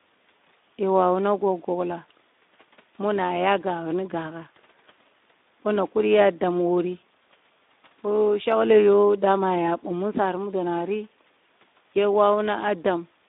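Speex codec damage runs through the whole clip. The speech is confined to a line band of 200 Hz to 3.7 kHz, and low-rate CELP coding, which fits roughly 11 kbps, starves the excitation, leaving the speech plainly hoarse and noisy.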